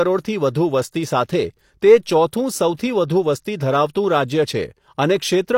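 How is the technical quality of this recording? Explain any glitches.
The speech carries one audible glitch. At 2.31 s there is pre-echo. The codec's block-wide quantisation noise leaks ahead of a sharp attack, adding about 18 ms of hiss and softening the onset.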